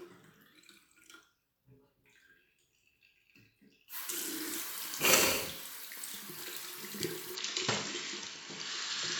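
A recording of sounds that goes abruptly dull at 7.35 s and stays that way to the end at 9.20 s: nothing above 7.6 kHz survives, and a faint new background noise, roughly 50 dB down, comes in with the change. The level barely moves and there is no gap at the switch. This is likely an input switched to a poorer device, not a codec's bandwidth drop, because the band narrows at one instant together with a different noise floor and tone.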